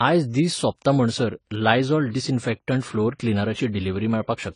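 Speech runs the whole way through with a dull, smeared top end and a fizzy warble on sibilants, likely AAC compression at a low bitrate, consistent with around 24 kbps. A spectrogram would show a hard ceiling near 10 kHz.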